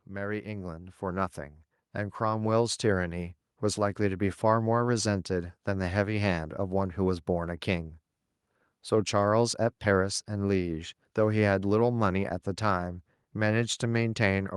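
From 0.06 to 4.41 s there's automatic gain rising: the AGC hears a quiet input and cranks up about 10 dB, so speech and background swell together.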